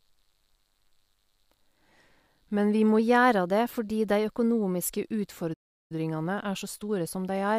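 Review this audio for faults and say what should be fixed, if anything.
From 2.99 to 4.97 s the speech runs about 5.8% fast and sits nearly a semitone sharp, roughly 97 cents, then snaps back to normal. This is likely a drift correction step, where clock-matching software changed the playback rate in one jump to rebalance its buffer.

At 5.53 s the speech cuts to silence for about 0.37 s, resuming at 5.92 s. This is likely a playback stall: the player ran out of data or its thread was blocked, so output stopped until it recovered.

From 5.92 s to the end at 7.58 s the speech is hurried to 1.1 times normal speed at normal pitch. This is time-compressed catch-up: the player trims the backlog left by the stall by cutting out small pieces and cross-fading across them.

To prevent these, adjust the clock drift continuously in very small rate steps rather than one jump, and give the player a larger buffer and a higher-priority audio thread so it never runs dry and needs no catch-up.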